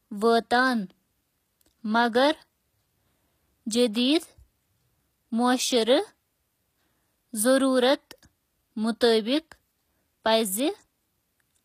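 HE-AAC compression runs throughout the speech, from start to finish. The treble sounds plainly processed: s sounds come out gritty and metallic, and nothing is heard above 14.9 kHz. This is likely HE-AAC at a low bitrate, around 24 kbps. Only the lower spectrum is coded, and the upper bands are rebuilt by copying lower content upward under a coarse envelope. The top end still reaches high, but its harmonics no longer match the real ones.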